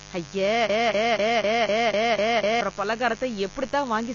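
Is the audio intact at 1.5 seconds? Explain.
No. At 1.5 seconds the speech is caught in a broken-record loop that runs from 0.70 to 2.61 s. The same quarter-second fragment, about 0.25 s long, plays back to back eight times, so the sound stutters mechanically instead of moving forward. This is likely a stalled player, encoder or stream that kept re-sending the last piece it held. Whatever should have been heard during those two seconds is gone.

Under the loop there is a steady, raspy buzz at roughly 20 dB below the speech. This mains buzz comes from 50 Hz interference with sharp switching spikes twice per cycle, probably from a dimmer, rectifier or poor shielding. Those spikes spread into a ladder of harmonics that climbs well into the kilohertz range, which gives the hum its gritty edge rather than a smooth tone.

The speech is also dull and smeared, with nothing above 7 kHz and a fizzy, warbling texture on sibilants. 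This points to AAC compression at a low bitrate, likely AAC-LC at around 24 kbps. At that rate the encoder lowers its cut-off and quantises the spectrum coarsely against its hearing model. That leaves gaps or noise-filled bands in place of the real high-frequency detail.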